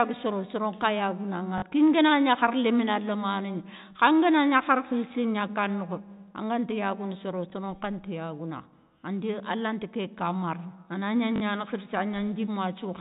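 Speech, carried over what sounds like G.711 telephone coding with nothing above 4 kHz, has packet loss with the last packet repeated at 1.58–1.62 s, 7.50–7.52 s and 11.36–11.40 s. Each gap is 20 or 40 ms, which fits 20 ms packets, filled by replaying stale audio, giving brief robotic stutters at 1.58 s and 11.36 s and a small blip at 7.50 s. The waveform shows short repeated blocks with abrupt edges.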